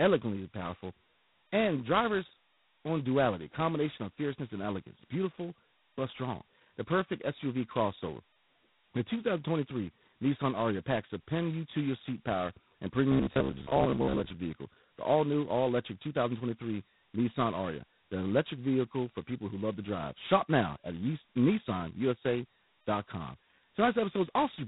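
Throughout, the speech carries heavy G.726 ADPCM damage, a harsh rasping hiss that tracks its level and fits 16 kbit/s, with the spectrogram empty above 3.9 kHz.

From 13.12 to 14.30 s, after "your seat power and", a robotic sound from repeated short buffers turns the speech into a metallic 66.7 Hz buzz. It is likely caused by a 15 ms buffer being replayed for about half that stretch. The waveform shows identical cycles repeating.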